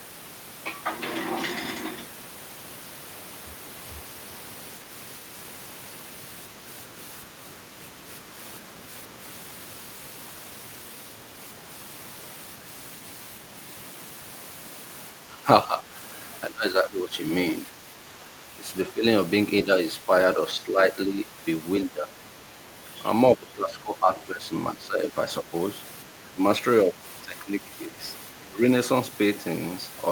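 From 15.2 to 15.9, 16.5 to 19.0, 19.6 to 22.2, 23.4 to 25.5 and 26.1 to 28.6 s, the speech dips in pieces. The drops are mild at first, then reach about 15 dB. This is likely speech suppressed in double talk. The echo canceller turns the near talker down along with the echo.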